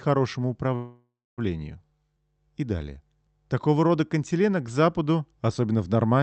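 Speech over a call path band-limited near 8 kHz, with a call audio freeze from 0.75 to 1.40 s: the last sound trails off and then goes silent for about 0.27 s. This is likely a jitter-buffer underrun. Speech resumes where it stopped, nothing lost, but 0.62 s later.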